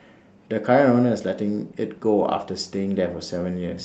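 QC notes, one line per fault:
No faults found in this speech clip. The WebRTC call path can be heard in the ordinary codec coding and a top end that stops near 8 kHz, which fits Opus at a modest call bitrate.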